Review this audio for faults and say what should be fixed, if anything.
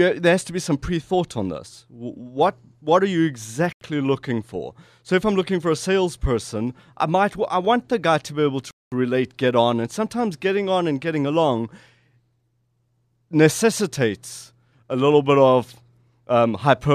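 The audio drops to silence twice and then resumes where it stopped. The first gap follows "what what are you" at 3.73 s and lasts 87 ms before "looking for". The second follows "guy to be able" at 8.71 s and lasts 210 ms before "relate get on and". This is likely a Bluetooth stall, with the headphone buffer running dry while delayed packets were resent.

There is a repeated buffer at 7.65 s, just before "the guy to be". A slice of about 11 ms plays twice with a hard join. That length fits a 512-sample buffer. It sounds like a brief click or buzz, and essentially nothing is skipped.

To prevent both faults, reduce wireless interference or use a wired connection, and give the playback chain a larger buffer so late audio doesn't starve the output.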